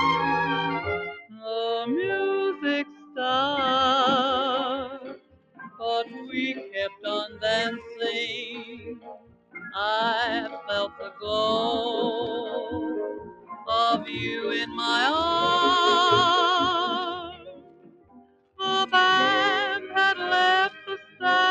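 A noise suppressor made for speech is acting on audio that isn't speech, and its gain rides up and down by roughly 15 dB throughout the clip. It treats anything sustained or ambient as noise, so onsets pass while held sounds and tails sag, giving a pumping, thinned quality. A compressor reacts to loudness and a gate to level thresholds. This processor reacts to steadiness, so quiet transients survive while loud sustained sounds get pulled down.

The sound is cut by the noise suppressor at 1.13–1.47 s (about 16 dB), 2.85–3.18 s (about 9 dB), 4.91–9.71 s (about 20 dB, the longest stretch), 10.61–11.24 s (about 10 dB), 13.13–14.78 s (about 16 dB), 17.19–18.6 s (about 20 dB), 19.8–19.95 s (about 6 dB) and 20.7–21.23 s (about 17 dB). Each time, the material sinks after its attack or its decay is truncated. A dropout or mute would also remove the attack, so these are not dropouts.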